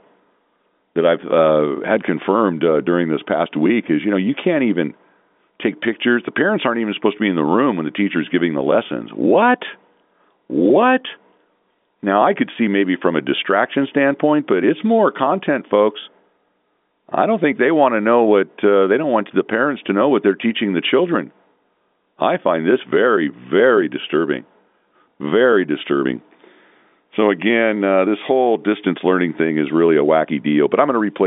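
Speech over a telephone line, with nothing technically wrong.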